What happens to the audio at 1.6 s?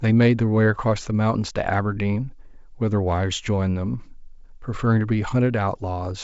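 At 1.6 s the speech carries on intact, with the G.722 wideband telephone coding leaving at most faint coding traces there.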